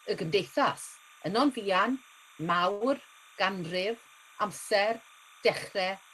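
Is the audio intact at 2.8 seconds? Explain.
No. From 2.71 to 2.83 s the sound freezes: whatever was playing is held and smeared for a little under a tenth of a second, with a slight buzz or dip, before the audio resumes where it left off. This is a short stall from a late packet. A packet missed its playout time, so the jitter buffer ran dry and the receiver stretched the last audio for about 93 ms until the packet arrived. Nothing is lost, but playback from that point runs about 93 ms late.

Under the same moment, as throughout the clip, there is a thin chirping warble that flips between pitches near 1 and 2 kHz, sitting roughly 25 dB below the speech. This is timecode bleed. A 30-frames-per-second linear timecode signal, a square wave that alternates between those two frequencies, has leaked from an adjacent track or cable into the audio path.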